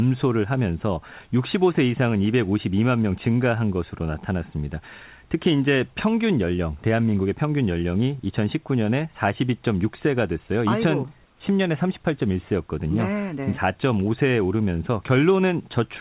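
Speech, carried over a narrowband call path with nothing above 4 kHz, as a 64 kbps G.711 link would give, with room noise about 42 dB below the voice. From 11.26 to 11.4 s, a 140 ms pause, the real background is swapped for a smooth, featureless hiss about 3 dB quieter. This is comfort noise in place of the background, likely from discontinuous transmission, where the receiver synthesises shaped noise while the sender stays silent. Unlike a dropout or noise gate, the gap never goes silent, and unlike loss concealment it repeats no fragment of sound. It is just steady, detail-free noise until the audio resumes.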